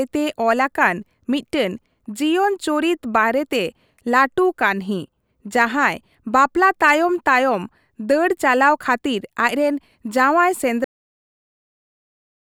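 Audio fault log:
10.84–12.43 s: cut-off end. Right after "ᱪᱟᱞᱟᱣ ᱠᱷᱟᱹᱛᱤᱨ ᱟᱪᱨᱮᱱ ᱡᱟᱶᱟᱭ" the speech breaks off mid-sound at 10.84 s and drops straight to digital silence for the last 1.6 s, with no decay, because the final buffers of audio were never written or played.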